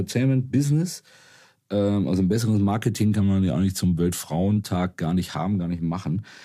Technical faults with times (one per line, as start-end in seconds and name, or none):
3.21-4.56 drift correction step